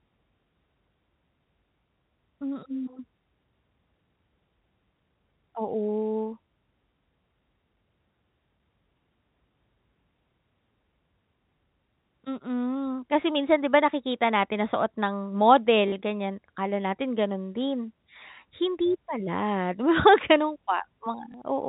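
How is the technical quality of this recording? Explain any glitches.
Two brief dropouts affect the speech, which is carried on telephone-band G.711 coding that cuts off at 4 kHz. Both show packet loss with the last packet repeated. At 15.88 to 15.92 s, just before "ganyan akala natin ganun", 40 ms of audio, which fits two 20 ms packets, was replaced by the previous one replayed. Another 20 ms repeat falls at 21.32 to 21.34 s. The first, a two-packet run, sounds like a short robotic stutter, and the single repeat like a small blip. On a waveform it shows as a copied, repeated segment.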